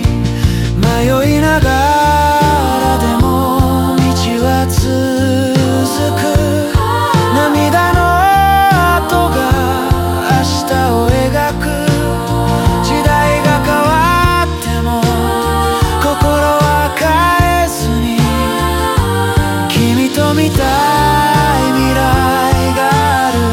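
No technical faults can be heard anywhere in the audio.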